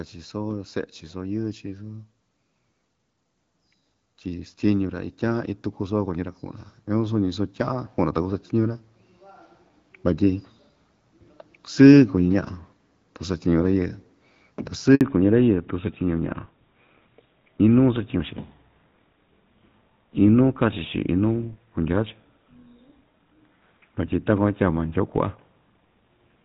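A handover gap at 14.95 s cuts this speech recording to silence for about 60 ms. The call was passed between networks, and no speech frames arrived during the switch, so the sound decays almost instantly and whatever was said in that instant is gone. Fallback to narrowband follows from 15.01 s to the end. Everything above 4 kHz disappears and the voice turns duller and rougher. Before the switch the clear wideband sound, with only light codec damage, fits AMR-WB HD Voice at 12.65 kbit/s. Afterwards the band limit and texture fit a drop to the older GSM full-rate codec at 13 kbit/s.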